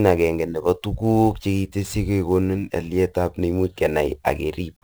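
From start to end, the speech carries sample clock jitter. The converter's clock wanders by roughly 10 microseconds, so samples land early or late. Fast-changing, loud passages suffer most. A gritty hiss rides the voice, about 25 dB below it, and disappears in pauses.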